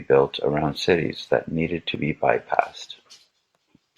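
At 1.95 s, between "cities that needed to" and "be bypassed", an overlap between stream segments cuts about 4 ms of genuine speech, which fits a boundary between 2-second segments. It sounds like a tiny click or skip. The waveform shows an abrupt step, and the spectrogram a thin vertical broadband line.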